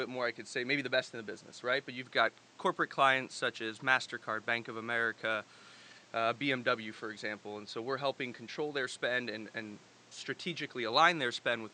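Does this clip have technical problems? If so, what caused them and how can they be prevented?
No, nothing technical goes wrong here; the speech just has a bit of ordinary room noise underneath it, sitting about 28 dB lower, and that's simply part of the recording.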